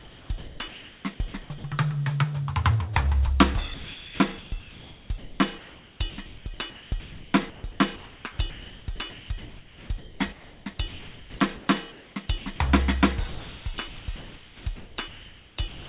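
Comfort noise in place of the background runs from 0.0 to 1.04 s. For about 0.88 s of that stretch, the music's real background is replaced by a steady, featureless hiss. The likely cause is discontinuous transmission: the sender's voice detector judged the opening to be silence and stopped sending, so the receiver filled the gap with synthetic noise loosely matched to the background, which erases its detail.

Sound chopped by the voice detector follows in four stretches: 1.42 to 1.64 s (about 140 ms replaced), 3.74 to 8.24 s (about 3.1 s replaced), 8.5 to 12.6 s (about 2.7 s replaced) and 13.28 to 15.88 s (about 2.05 s replaced). The likely cause is a detector that toggled between sending and muting within each stretch. Quieter passages and note edges drop into generated noise, so the music sounds choppy. The call path's narrow band, with nothing above 4 kHz, fits G.711 mu-law at 64 kbps.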